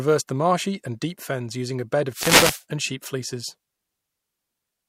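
A wireless microphone noise hit interrupts this speech clip from 2.09 to 2.64 s, a burst of static swishing over the voice. The analogue FM radio link fades as reflected signals cancel the direct one, so receiver noise rises.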